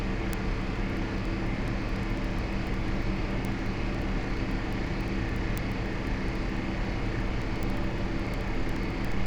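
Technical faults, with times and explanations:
0.12–9.26 s: word clock ticks, sharp uneven clicks roughly every 70 ms, as an unlocked receiver drifts a few hundred ppm and slips a sample each time.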